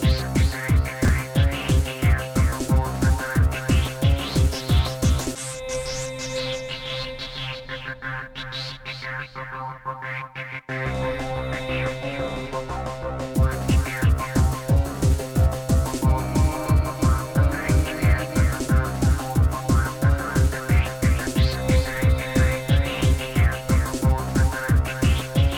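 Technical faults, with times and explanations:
1.05–1.09 s, chunks out of order: a brief jumbled stutter. One 10 ms chunk of sound arrives three chunks late and plays after the material meant to follow it. Nothing is lost, but the reordering leaves three hard joins.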